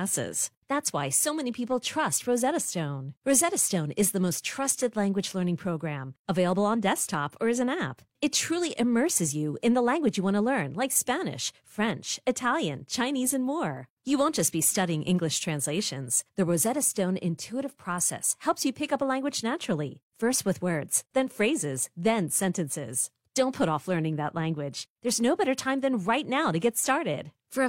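No technical faults can be heard anywhere in this recording.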